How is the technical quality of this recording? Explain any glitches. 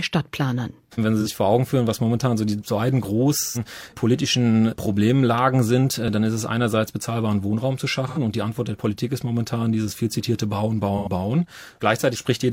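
The recording has four dropouts caused by AAC frame loss with concealment. They occur at 1.20–1.27 s, at 3.40–3.62 s just after "momentan so die beiden", at 8.07–8.19 s just before "und die", and at 10.97–11.08 s. The missing stretches run from about 43 ms to 128 ms, which fits one to three lost frames. The decoder patches each gap from the last good spectrum, so the speech turns briefly smeared and noisy. The 3.40 s gap is the longest.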